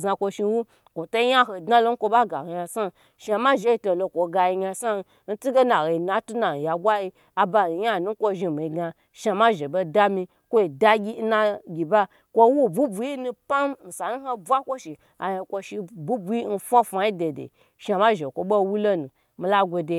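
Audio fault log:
No technical fault can be heard anywhere in the speech recording, and the signal holds steady throughout.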